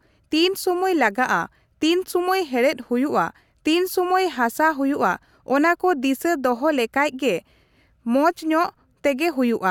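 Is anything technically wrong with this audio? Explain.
No, nothing is technically wrong with this audio.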